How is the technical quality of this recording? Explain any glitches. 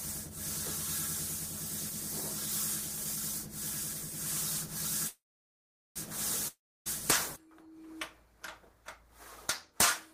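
Two glitches interrupt the recording, both around the middle.

Call audio freeze, 5.07 to 5.98 s: packets were likely delayed, emptying the jitter buffer. A fading buzz gives way to about 0.78 s of silence, then the sound resumes where it stopped, with nothing lost.

Long network dropout, 6.48 to 6.88 s: audio likely never arrived. A brief fading hiss turns to about 0.29 s of silence, and the sound returns about 0.38 s further on, with that stretch missing.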